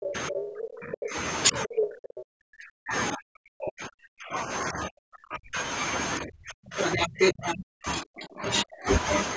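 From the very start to 1.16 s the talker's level sinks by up to about 30 dB for roughly a second. This is speech suppressed in double talk: the echo canceller likely could not tell the talker from the loudspeaker echo while both sides spoke, so it turned everything down. Unlike a dropout, the sound dips and thins in pieces rather than stopping cleanly. Inside that stretch, from 0.06 to 0.13 s, a brief scrap of the other side's voice leaking through sits about 5 dB below the talker.

The suppression returns from 1.51 to 5.61 s, cutting roughly four seconds of the talker by up to about 40 dB. It comes back from 6.2 to 8.88 s, cutting about two seconds by a similar depth.

In that last span the leak is stronger. From 6.84 to 7.53 s the second voice rises about 5 dB above the talker. At 8.54 to 8.63 s it matches the talker's level. This is a separate voice with its own timing, so it is not a delayed copy of the talker, as an echo of their own sound would be. 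Through all of it the call's microphone processing leaves nothing above 8 kHz.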